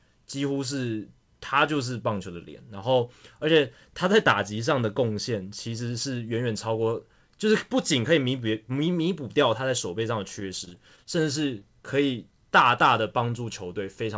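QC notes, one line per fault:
10.40–11.07 s, repeated packet loss (robotic sound): six gaps in quick succession, the longest 20 ms, about 60 ms of audio missing in total, and 93 ms of substitute sound covering 14% of this stretch. Each hole is filled by stretching the preceding sound, so the audio turns choppy with pieces missing. On a spectrogram, harmonic bands flatten into frozen strips with hard vertical seams. The waveform shows short repeated cycles where the real sound should be. The band stops at 8 kHz, which fits the G.722 call path.
11.59–11.63 s, short concealed packet loss: about 20 ms never arrived, and 16 ms of synthetic continuation bridges the hole before real audio resumes. It is heard as a brief smear or wobble, shorter than the earlier run. On a spectrogram, a thin sliver shows smoothed or frozen energy with slightly blurred edges. The waveform shows a few repeated periods or a softened envelope where the fill blends back into the decoded signal.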